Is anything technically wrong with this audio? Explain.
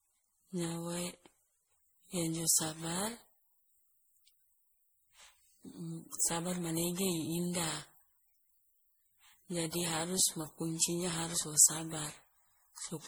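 Yes. Throughout the speech, the audio shows generation loss, most likely from being decoded and re-encoded around ten times with a lossy codec whose artefacts fit MP3 at 64 kbit/s. Each pass quantises the signal again on a shifted frame grid, so the noise and missing spectral bands from earlier passes build on one another. The result is a swirling, smeared, hollow quality stronger than one encode at that bitrate would give, with consonant attacks blurred.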